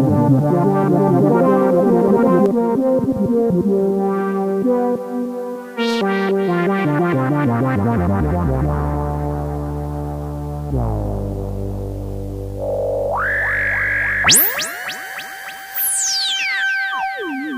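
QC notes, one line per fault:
0.00–2.46 s, doubled audio track: the sound is already doubled when the clip opens. A second full-band copy runs roughly 0.7 s behind the original at about the same level, with no decay or room colour, so it reads as a clean duplicate rather than an echo. The lagging copy cuts off abruptly at 2.46 s. The likely cause is the same signal being captured a second time through a slower path and mixed back in.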